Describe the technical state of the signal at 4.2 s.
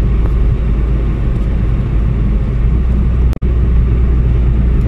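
At 4.2 s the signal is intact, with no audible fault at that moment.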